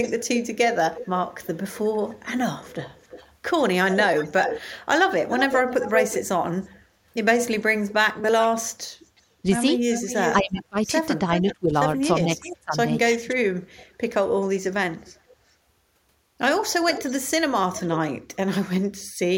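Echo leak runs from 0.02 to 6.76 s and again from 7.89 to 11.54 s: a copy of the speech trails it by about 360 to 370 ms, at first nearly as loud as the original, later roughly 10 dB down. The likely cause is a loudspeaker whose output reached the far microphone and slipped past echo cancellation. Speech suppressed in double talk spans 10.31 to 13.35 s, where the speech dips by up to about 25 dB for roughly a second in total while both sides overlap. The canceller, likely unable to tell the talker from the echo, turned both down. The echo returns briefly at 12.45 s, then from 13.76 to 15.36 s as a faint trace and from 16.88 to 17.99 s at about 15 dB below, its delay creeping to around 390 ms.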